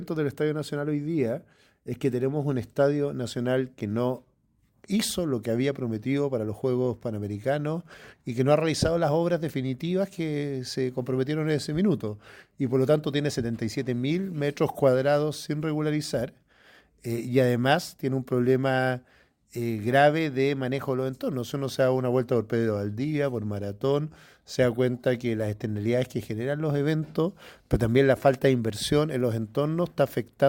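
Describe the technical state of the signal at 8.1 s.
At 8.1 s the signal is intact, with no audible dropout, distortion, noise burst or other fault.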